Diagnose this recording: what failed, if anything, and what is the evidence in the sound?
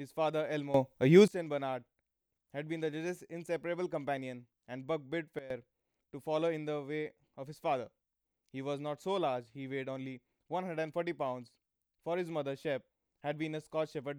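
Two sudden gain jumps in the digital processing chain. From 0.74 to 1.28 s the speech and the background noise rise together by about 16 dB, then fall back. From 5.39 to 5.50 s both drop by about 14 dB before recovering. The level changes from one sample to the next, with no fade in or out. The likely cause is a gain setting or bit shift applied abruptly, without any ramp.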